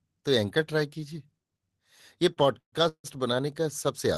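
A short stall from a late packet at 2.33 to 2.38 s opens a run of timing faults in this speech clip, which passes through a WebRTC-style call codec whose band stops around 12 kHz. A packet arrived about 30 ms late, the jitter buffer emptied, and the receiver held the last sound for that 30 ms before resuming from the same point. Nothing is lost, but the sound lingers with a slight buzz or dip. Call audio freezes follow at 2.58 to 2.74 s and 2.88 to 3.06 s, likely caused by packets held up in transit so that the buffer drained twice. Each time the receiver extended the last sound into a fading buzz or hiss that dropped to silence, about 120 ms in the first and about 80 ms in the second. Playback then resumed where it had stopped, inserting gaps of 140 ms and 156 ms without discarding any audio.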